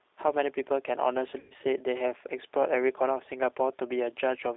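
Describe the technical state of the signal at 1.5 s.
At 1.5 s the signal sits inside a stretch of VoIP packet loss concealed by the speech codec, from 1.40 to 1.53 s. About 100 ms of audio went missing, consistent with several lost packets, and the decoder filled the gap by repeating its last pitch and filter settings at falling gain. The result is a buzzy tone or coloured noise that fades. On a spectrogram it shows as flat, smeared harmonics, and the waveform shrinks into a repetitive decaying pattern.

Underneath, the G.729 codec is plainly audible. Its sound is slightly rough and synthetic, consistent with roughly 8 kbit/s, because the decoder rebuilds the signal from a filter, pitch predictor and sparse pulses. The spectrogram shows a band from 300 Hz to 3.7 kHz with nothing above it, and the harmonics look grainy.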